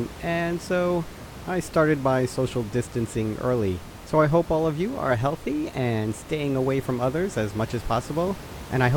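The speech recording shows no technical faults, with only the ordinary background noise of the room sitting about 16 dB below the speech.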